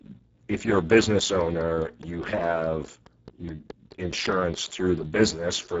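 From the very start to the end, the speech carries heavy Speex codec damage. There's almost nothing left for the excitation signal, so the voice comes out hoarse and noisy, the sound of a bitrate down around 6 kbps. Up top, everything past 4 kHz is just a shaped hiss standing in for real detail, and there's nothing at all above 7.7 kHz.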